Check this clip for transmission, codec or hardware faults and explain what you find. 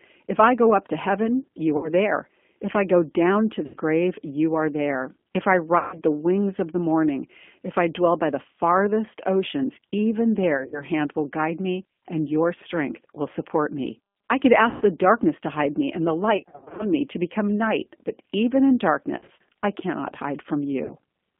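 Two faults are present: a narrowband speech codec across the whole recording, and eight short dropouts patched over by that codec.

G.729 codec, throughout: the speech sounds plainly rough and faintly synthetic, confined to roughly 200 Hz to 3.5 kHz. At 8 kbit/s, G.729A rebuilds each 10 ms frame from a vocal-tract filter, a pitch predictor and a few sparse pulses, discarding fine detail.

VoIP packet loss concealed by the speech codec, at 1.77 s (60 ms), 3.66 s (80 ms), 5.78 s (140 ms), 10.57 s (110 ms lost over 160 ms), 14.69 s (120 ms), 16.37 s (310 ms lost over 420 ms), 19.18 s (70 ms over 100 ms) and 20.85 s (40 ms): the speech smears into a fading buzzy tone or coloured noise. The decoder repeats its last pitch and filter at falling gain. Recovery is slow, so the speech stays weak briefly afterwards.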